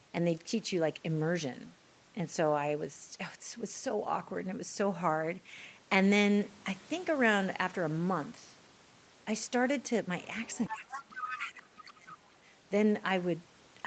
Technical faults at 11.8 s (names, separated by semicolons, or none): speech suppressed in double talk; other side's voice leaking through